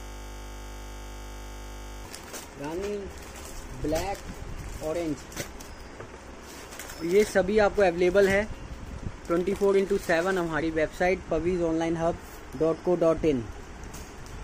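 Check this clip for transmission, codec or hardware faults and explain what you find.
A system hang loop is present from the start, already under way at 0.0 s and running to 2.05 s. The audio output froze on one 20 ms ring buffer, repeating it about a hundred times, which produces a steady 50 Hz buzz. Unlike mains hum, it replaces the audio entirely.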